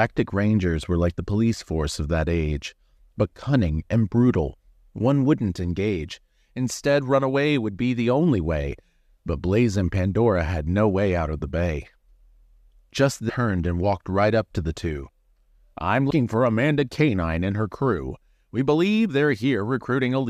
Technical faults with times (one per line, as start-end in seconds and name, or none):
13.28 damaged data in a compressed stream
16.09 damaged data in a compressed stream